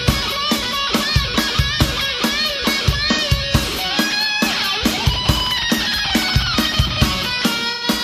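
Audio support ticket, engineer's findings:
AAC frame loss with concealment at 3.12–3.19 s and 7.73–7.84 s: short smeared, phasey patches where the decoder patched over one, then about two, dropped frames from the last good spectrum.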